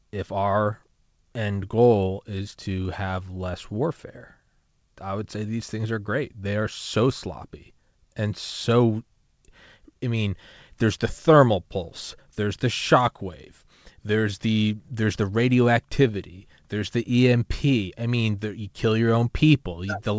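No faults occur anywhere in the speech; it arrives through the call path with its band ending at 8 kHz, as a wideband codec such as G.722 would leave it.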